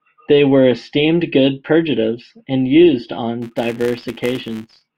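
This is a speech clip with a filter restarted on every block. From about 3.42 s to the end at 4.97 s, just after "good purgatives and used", a buzz near 188 Hz rides on the speech. Its strength follows the level of the speech. The cause is a filter that drops its memory at each block boundary and starts again from silence. Each restart leaves a small transient. That repeat rate fits a 256-sample block.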